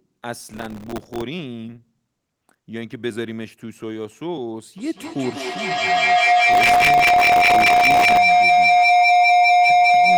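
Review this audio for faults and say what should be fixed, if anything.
Processor overload crackle runs from 0.40 to 1.22 s and again from 6.52 to 8.17 s. Many tiny buffers, roughly 1.5 ms each, miss their deadline. Each gap is filled with old audio, which makes a gritty tearing. Reducing processing load or enlarging the buffer prevents this.

Feedback howl starts at 4.78 s and lasts to the end. A room loop builds a tone near 700 Hz. The loop repeats about every 200 ms, and the howl peaks about 13 dB above the speech. Muting one device, or using headphones, prevents it.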